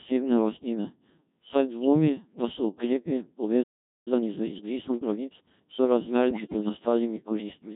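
The speech runs through a Codec 2 vocoder for its whole length, at a heavily damaged low-rate setting consistent with the 1.3 kbit/s mode. Nothing of the original waveform survives. The decoder rebuilds each frame from a pitch value, a voiced or unvoiced decision, a level and a coarse spectral outline, then sums sine waves to match. The result is a flat, buzzy, robotic voice.

From 1.79 to 1.87 s there are bit errors on digital voice radio. At this bitrate each bit steers the parameters of an entire frame. A corruption rate of a few percent, landing on what sounds like two frames, throws the pitch and level off for a moment. It comes through as a brief bleep or chirp where the voice jumps out of line and snaps back.

At 3.63 s a playback stall cuts the sound off mid-flow, and it stays silent for about 0.43 s until 4.08 s. The most likely cause is that the player ran out of buffered data.

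From 4.08 to 5.80 s a time-compressed catch-up follows. The player works off its backlog by removing short slices and cross-fading across the joins, which runs the speech at 1.25 times normal speed while keeping the pitch unchanged. Delivery sounds rushed and clipped on top of the existing vocoder buzz.

A second, longer burst of bit errors on digital voice radio hits from 6.31 to 6.69 s. A slightly higher error rate spread across what sounds like about ten consecutive frames sends pitch, loudness and timbre jumping from frame to frame. For roughly 0.4 s the voice turns into warbling robotic gibberish.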